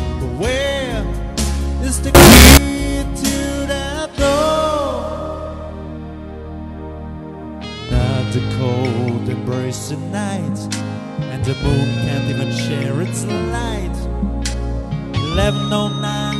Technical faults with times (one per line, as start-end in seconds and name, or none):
2.15-2.57 float read as integer